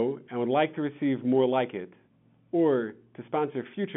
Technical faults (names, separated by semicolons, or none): none